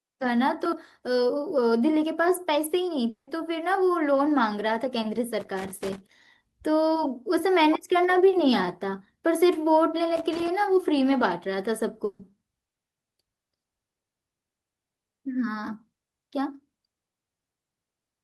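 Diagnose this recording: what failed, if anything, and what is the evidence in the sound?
At 3.09 to 3.29 s the sound freezes into a fading buzz or hiss, drops to silence, then resumes with a piece missing. This is likely a long network dropout, concealed by the receiver.

Irregular scratchy crackle runs from 5.40 to 6.11 s and again from 10.16 to 10.48 s. This is loose connector crackle in the analogue wiring, where an intermittent contact chops the signal.

At 12.05 to 12.21 s the sound is held as a decaying buzz or hiss for about 140 ms before jumping ahead. This is a burst of packet loss on the network, where lost packets were filled by extending the last audio.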